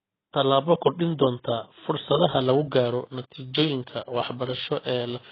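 AAC compression runs through the whole speech clip: nothing is heard above 3.9 kHz, and the audio sounds dull and smeared with a warbling, fizzy edge on sibilants. The likely cause is heavy AAC-LC coding at a rate that fits roughly 16 kbps.

Periodic clock jitter starts at 2.41 s, right after "kordhin doonta fursadaha", and lasts to the end at 5.32 s. A wobble of around 1 kHz in the converter clock puts sidebands on every component, giving a rough, metallic edge that is strongest on higher sounds.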